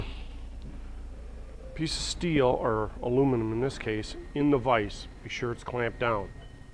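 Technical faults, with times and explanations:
No technical faults found in the audio.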